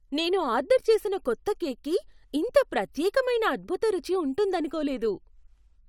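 No technical faults can be heard at any point in the recording.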